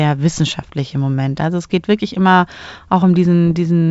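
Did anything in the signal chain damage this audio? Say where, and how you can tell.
Yes. Bit errors on an ADPCM link, from 3.47 to 3.57 s, hit the G.722 stream at a low rate, well under one percent. Each flipped bit throws off the decoder's step size and predictor, so the speech breaks into pops and rough bursts with brief level jumps.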